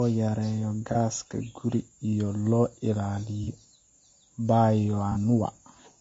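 Low-delay AAC compression runs through the whole speech clip, and the damage is plainly audible: voices sound rough and grainy, with noise filling the gaps between pitch harmonics and a thin, somewhat synthetic top band. The likely cause is AAC-ELD coding, the low-delay AAC used in video calls, at a rate that fits roughly 32 kbps. Its very short frames resolve harmonics poorly and spend bits inefficiently, so the spectrum gets coarse.

AAC frame loss with concealment occurs three times, at 0.92 to 0.97 s, 3.44 to 3.48 s and 5.12 to 5.17 s. Each time a single frame, about 30 ms of audio, went missing, and the decoder patched the gap by extrapolating from the last good spectrum. Each loss is brief, so it never decays into silence. Instead it leaves a short smeared, noisy or phasey blip where the sound briefly loses its definition.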